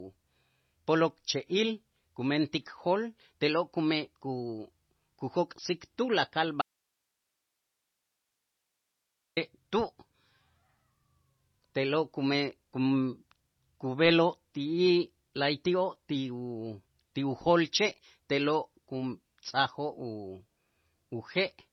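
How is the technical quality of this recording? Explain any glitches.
The recording is technically poor, with heavy codec damage throughout and one clear break in the speech.

MP3 compression runs through the whole clip. Nothing is present above 5.9 kHz, and the remaining speech has a watery, swirling quality with smeared consonant attacks. This is likely a low-bitrate MP3 encode, consistent with about 24 kbps, where the encoder cuts the treble and drops weak spectral lines frame by frame.

An audio dropout to a faint residue occurs from 6.62 to 9.37 s. The speech cuts abruptly for 2.75 s, leaving only hiss roughly 55 dB below the signal, and then returns just as abruptly. The likely cause is a loss of the source signal while the downstream path stayed live and carried its own noise floor.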